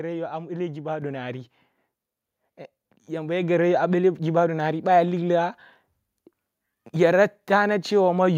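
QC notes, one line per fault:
1.02 s and 3.42 s: microphone volume stepped up. The input gain jumps about 5 dB, then about 4 dB, so voice and background get louder together in one instant step.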